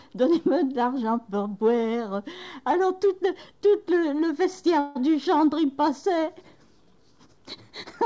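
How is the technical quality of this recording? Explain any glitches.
The recording has one clear glitch, a call audio freeze from 4.80 to 4.97 s. For about 150 ms the last sound is stretched into a fading buzz-like tail with no true silence, and then the audio resumes exactly where it left off, so nothing is lost but everything after it arrives later. The likely cause is packets delayed in transit, draining the jitter buffer so the receiver had to improvise filler until they arrived. Across the whole clip, the G.722 call path leaves nothing above 8 kHz.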